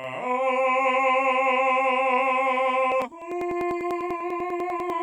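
Channel delay (doubling) runs throughout the music: one channel arrives 40 ms late and is summed with the other, so every attack sounds doubled, like a slap echo at equal level. Periodic USB or driver dropouts run from 2.92 s to 4.90 s. Every 0.099 s, about a millisecond of audio is skipped, about twenty times in total, producing a steady train of ticks roughly ten per second.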